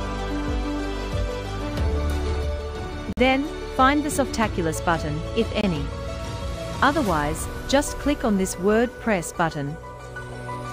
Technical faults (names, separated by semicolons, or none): Bluetooth stall